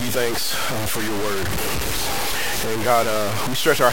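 Throughout, the audio was likely truncated to about 4 bits without dither, so grainy, signal-following distortion nearly as loud as the sound itself roughens everything.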